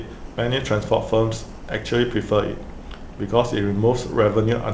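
No technical faults can be heard anywhere in the speech. It has come through a WebRTC call path working normally, and the G.722 codec leaves nothing above 8 kHz, giving it the slightly muffled top end of a wideband call.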